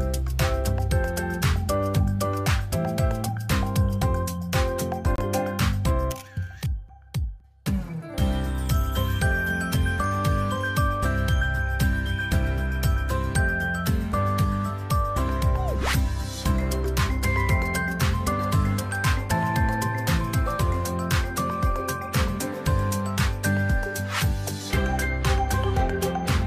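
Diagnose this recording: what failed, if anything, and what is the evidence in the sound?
At 5.16 to 5.18 s the audio drops to silence for about 26 ms and then carries on. The likely cause is a Bluetooth stall at the wireless playback stage. Radio interference held back packets on the link, the headphones' receive buffer emptied, and output paused until the retransmitted data arrived. The gap is true silence rather than a burst of codec garble, which separates it from a lossy-codec concealment artefact.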